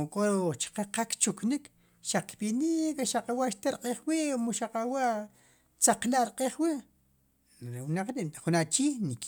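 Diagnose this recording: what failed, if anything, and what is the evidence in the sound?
Nothing failed, and the sound gives no evidence of a fault at any stage.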